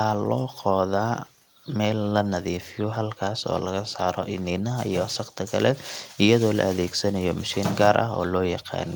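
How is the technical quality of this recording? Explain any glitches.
Nothing stood out on listening to this speech recording, apart from some quiet background noise from the room, sitting about 42 dB below the speech, which belongs to the recording itself rather than to any glitch.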